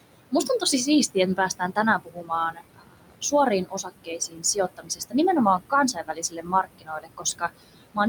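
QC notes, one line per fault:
Throughout, noise suppressor artifacts: the suppressor pulls the steady room noise, which sits about 11 dB under the speech, down by about 21 dB in the gaps and lets it back up under the speech, so the background pumps.
1.99–2.31, 2.51–3.33, 3.65–4.57, 4.77–5.14 and 5.93–7.5 s, speech cut by the noise suppressor: quiet parts of the speech get mistaken for noise and pulled down by about 17 to 21 dB, so soft sounds and endings come out swallowed, with the longest stretch near the end.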